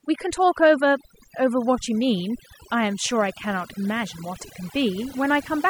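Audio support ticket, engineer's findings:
Overdone noise removal, present throughout the speech. Background drops and breaks up into twinkling specks. Probable component: noise reduction stage set too aggressive. Mechanism: individual frequency bands near the noise estimate pulled far down or switched off, taking quieter voice detail with them. Isolated bands popping in and out produce the specks. Suggest lowering reduction depth, reprocessing from source.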